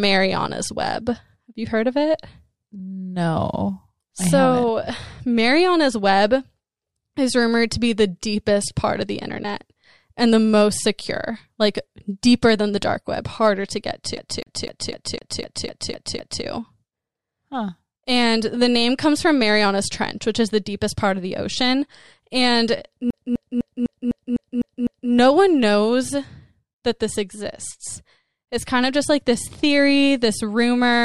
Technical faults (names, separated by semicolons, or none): CD stuck on one turn